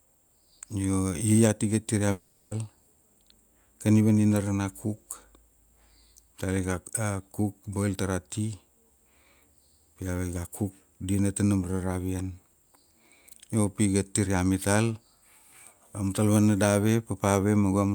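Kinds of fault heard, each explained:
Long network dropout: at 2.11 to 2.54 s the sound smears into a fading buzz for about 0.4 s, likely from audio that never arrived, then resumes with that stretch missing. Unlike a brief packet-loss glitch, it lasts tenths of a second and skips content.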